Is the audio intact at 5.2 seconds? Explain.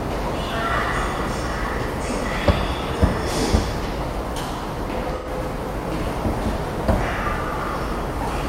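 No. At 5.17–5.28 s, AAC frame loss with concealment occurs: the decoder rebuilt about 85 ms, likely two lost frames, from prior spectra, leaving a smeared, noisy patch.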